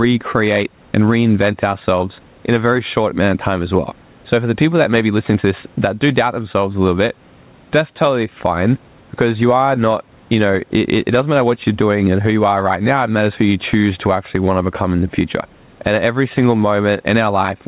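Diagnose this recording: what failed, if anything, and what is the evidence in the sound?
Gain pumping runs throughout: loud and soft parts sit closer in level and the sound is squashed, with the gain swinging around 10 dB. The cause is likely microphone gain set far too high, with a fast limiter in call processing clamping peaks. The waveform looks flattened.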